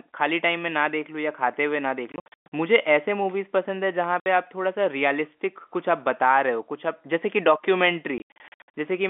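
Packet loss filled with silence at 2.12–2.46 s, 4.20–4.26 s and 8.18–8.70 s: lost packets were replaced by silence, leaving hard-edged holes in the speech that fit 20 ms packets, with the longest gap about 120 ms.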